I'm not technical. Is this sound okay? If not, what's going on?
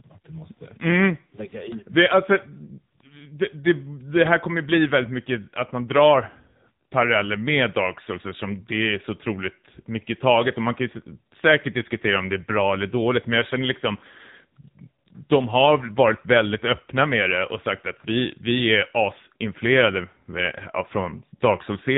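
No. The whole clip has passed through the AMR narrowband mobile codec, the old phone-network speech format. Nothing above about 3.8 kHz survives, so the voice sounds boxed-in, and the heavy compression leaves it plainly buzzy and synthetic from start to finish.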